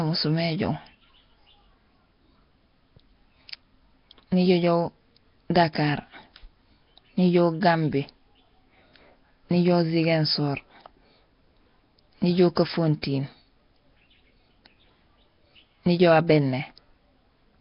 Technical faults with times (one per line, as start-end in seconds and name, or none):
0.00-17.60 Nellymoser compression